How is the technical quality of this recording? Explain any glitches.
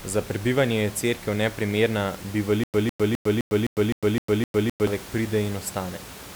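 The recording has one glitch, a stutter with silent gaps, heard against room noise about 16 dB below the speech. From 2.64 to 4.87 s, one 155 ms fragment of speech repeats eight times. Each repeat is followed by 103 ms of digital silence, giving an even 258 ms cycle. The likely cause is a stalled player or stream replaying its last fragment on each retry, so the speech belonging to that stretch is lost.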